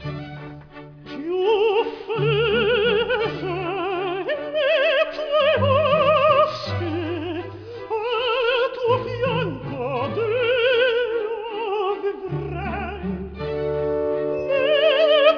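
Throughout the audio, aliasing: the rate was dropped without an anti-alias filter, apparently to about 11 kHz, so content above 5.5 kHz folds back as unrelated pitches roughly 30 dB below the signal.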